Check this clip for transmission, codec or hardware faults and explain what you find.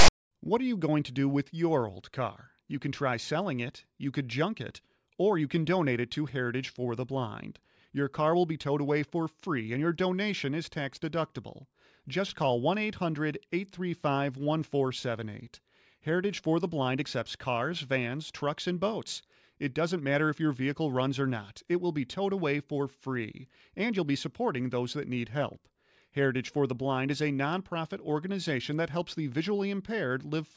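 One fault, at the very start of the speech. From 0.00 to 0.08 s a loud, hard-edged rasp sits lopsided to one side. This is file tags played as audio: a block of text metadata decoded as if it were samples.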